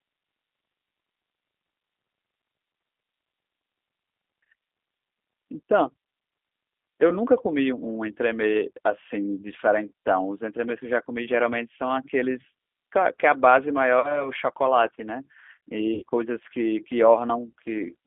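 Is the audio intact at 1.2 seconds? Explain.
No. At 1.2 s the speech carries G.729 codec damage that runs through the whole clip. The sound is rebuilt from a vocal tract filter, pitch predictor and sparse pulses, which fits an 8 kbit/s stream, so it sounds plainly rough and synthetic. A spectrogram shows energy confined to about 250 Hz to 3.5 kHz, empty above.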